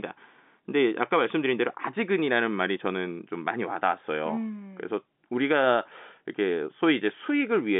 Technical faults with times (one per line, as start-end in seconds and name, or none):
none